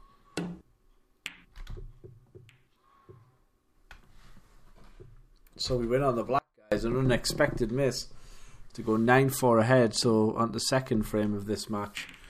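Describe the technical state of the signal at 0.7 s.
At 0.7 s the signal is intact, with no audible technical fault.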